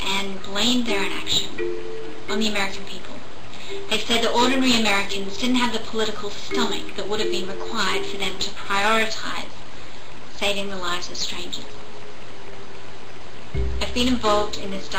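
Nothing technical goes wrong anywhere in this audio, so there's no fault here to point to.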